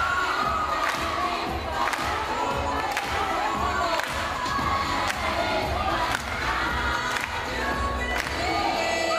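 Nothing stood out as a technical problem on listening to the audio.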